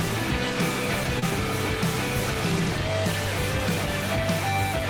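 At 1.19 s to 1.24 s there is a brief smear in the sound, a wobble where the texture carries on a moment too smoothly before the true signal returns. This is short concealed packet loss. About 20 ms of audio never arrived at the decoder in time, so the receiver synthesised roughly 23 ms of replacement by extending the preceding sound, then cross-faded back into the real stream, leaving that blurred seam.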